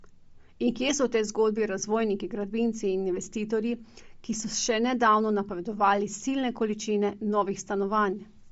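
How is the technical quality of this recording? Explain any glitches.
The technical quality is limited by codec damage that runs through the whole speech clip. Nothing is heard above 7.7 kHz. The upper band has a breathy, grainy edge. The likely cause is Bluetooth LC3 compression. Its transform frames drop upper detail and fill it with noise. The damage is plainly audible, which fits a low bitrate near 32 kbps.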